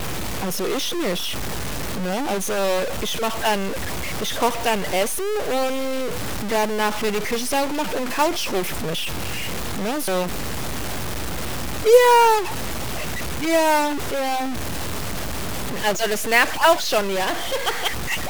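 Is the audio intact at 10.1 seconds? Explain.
No. At 10.08 s there is a skip. This is audio missing between chunks. The recording was likely made in 4-second blocks, and about a tenth of a second was lost at the changeover. The two sides butt straight together with no silence in between. The speech jumps forward abruptly.

The moment also carries a stuck bit, present through the whole clip. One data bit likely sits fixed at a single value, so many samples are off by that bit's weight. This adds grainy noise or buzzy distortion over the speech. Pauses fill with a noise floor that follows the sign of the quiet signal.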